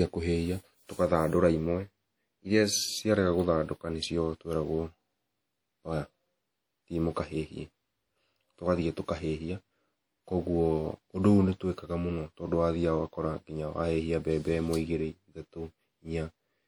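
Throughout the speech, plainly audible WMA compression is the likely cause of a ringing, washy quality: quantisation noise smeared over tens of milliseconds and hiss breathing with the signal. The content stays continuous to 20.1 kHz at a rate near 48 kbps, so this is steady transform-codec smear, not the choppy gaps of packet loss.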